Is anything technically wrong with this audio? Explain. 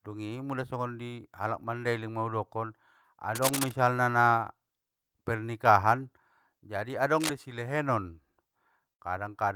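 Yes, there are two kinds of fault in this speech clip.

From 3.35 to 3.72 s and again from 7.13 to 7.30 s, a dense, uneven scratching rustle sits over the speech, nearly as loud as the voice. This is cable scratch noise, likely from a worn cable or connector being moved, its contact resistance jumping rapidly.

From 8.93 to 9.08 s, the sound briefly freezes into a held, fading tail, then jumps ahead. This is a burst of packet loss. About 50 ms of the last sound was stretched and faded to cover the gap, and roughly 60 ms of speech never arrived.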